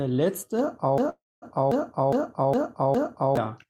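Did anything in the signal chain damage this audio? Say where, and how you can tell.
Yes. From 0.98 to 3.37 s there's a broken-record loop: a 410 ms piece repeats five times back to back, likely a stalled playback stream resending its last fragment, and the speech that belonged there is lost.

There's also a call audio freeze at 1.09 to 1.45 s. The sound stretches into a fading buzz or hiss, then about 220 ms of silence. That likely points to network jitter emptying the buffer, and it inserts a 325 ms gap.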